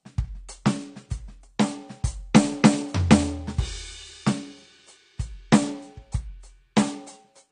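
From the first second to the last, the music sounds dull and smeared, with nothing above 9.6 kHz and a warbling, fizzy texture clinging to sustained tones. This is plainly audible AAC compression, likely from an AAC-LC encoder starved of bits, and the damage points to a bitrate around 32 kbps. The encoder drops the top of the spectrum and quantises the remaining bands so coarsely that gaps open and shimmer from frame to frame.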